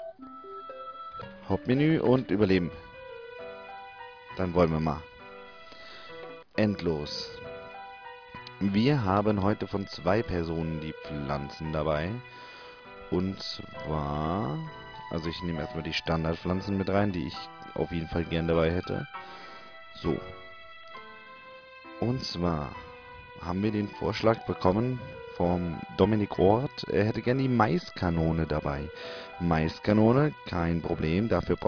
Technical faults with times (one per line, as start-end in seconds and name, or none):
none